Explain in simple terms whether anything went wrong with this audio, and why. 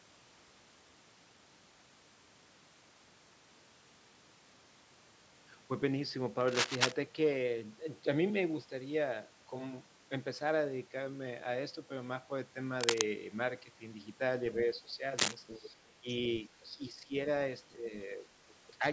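A few things went wrong in this recording. First, there's cable scratch noise: scratchy, rustling bursts at 6.48 to 6.92 s, 12.81 to 13.04 s and 15.18 to 15.35 s, as loud as the voice or a bit louder. It's likely a worn cable or connector being jostled, so its contact flickers.

Next, the other side's voice is leaking through. Faint scraps of a second voice come in at 14.61 to 14.79 s and 15.47 to 15.70 s, then even fainter at 17.71 to 17.75 s and 18.48 to 18.54 s. The likely cause is the far end playing on a loudspeaker, with the echo canceller not catching all of it.

Finally, there's speech suppressed in double talk. The talker's voice briefly sinks at 16.01 to 16.08 s, again for a few tenths of a second within 16.43 to 17.13 s, and slightly at 18.79 to 18.83 s. Both sides were likely talking at once, and the echo canceller turned everything down.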